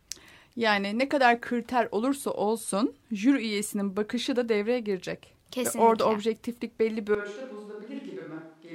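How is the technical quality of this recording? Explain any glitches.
There is one glitch, near the end. A switch to a distant microphone occurs at 7.15 s, right after "objektiflik belli bir", and lasts to the end. The close microphone's signal likely dropped out, leaving only a pickup further away that hears more of the room. The speech turns suddenly roomy and hollow with thinner bass, falls by about 10 dB, and a room noise floor emerges at roughly 35 dB below the speech.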